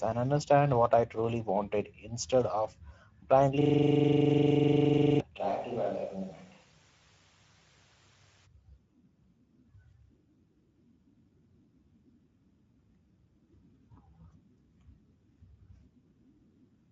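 Throughout the speech, the Speex codec leaves plainly audible damage. The excitation is coded too coarsely, so the voice sounds hoarse and grainy. The damage is consistent with a bitrate in the region of 17 kbps. Nothing reaches above 7.7 kHz. On a spectrogram this shows as a hard ceiling at 7.7 kHz.

From 3.61 to 5.20 s a system hang loop takes over. The machine or driver stalled while the audio hardware kept replaying one 42.67 ms slice of its ring buffer, a length that fits a 2048-sample buffer. That slice repeats 37 times at 23.4 Hz, giving a rapid, rattling machine-gun stutter. A waveform shows one identical block tiled end to end, and a spectrogram shows vertical striping at exactly that spacing.

Between 5.40 and 8.45 s the sound turns suddenly roomy and hollow. This is most likely a switch to a distant microphone after the close one dropped out. The level falls by about 5 dB, the bass thins, and room noise rises to about 30 dB below the speech. 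The waveform steps down in amplitude at the start and back up at the end. The spectrogram shows weaker low end, reverberant tails blurring the onsets, and a raised noise floor.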